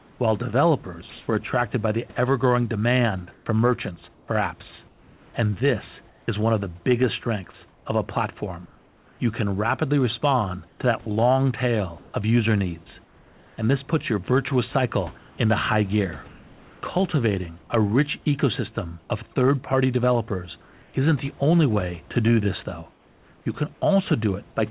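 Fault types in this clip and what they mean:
Sound chopped by the voice detector: The sender's voice detector likely kept switching between sending and muting during the first 6.3 seconds, and each time it muted, the receiver substituted synthetic noise. About 1.4 seconds of real audio in that stretch is lost this way. The speech comes through choppy, with quiet syllables and word edges dropping out.
Comfort noise in place of the background: When the voice detector decided no one was talking, the sender stopped transmitting, and the receiver likely filled the gaps with generated noise shaped roughly like the background. This happens in pauses between 7.68 and 23.82 s, replacing between 0.1 and 0.8 seconds at a time. The natural room noise turns smooth and featureless, and at 19.0 s and 20.6 s it also drops, by about 5 dB and about 2 dB respectively.
Onset clipped by the voice detector: The voice detector was slow to recognise that speech had resumed, so the beginning of the sound at 19.08 s likely went untransmitted and was replaced by the synthetic fill. 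About 20 ms is missing. The speech cuts in abruptly instead of building from a soft start, right as the comfort noise before it ends.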